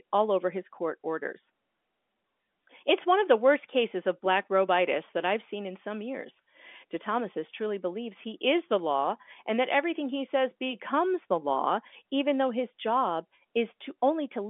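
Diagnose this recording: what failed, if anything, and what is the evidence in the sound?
Nothing failed, and the sound gives no evidence of a fault anywhere along the telephone path this speech was carried over.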